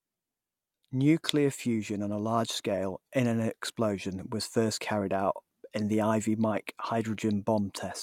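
No technical faults can be heard anywhere in the recording: the speech signal stays continuous and stable throughout.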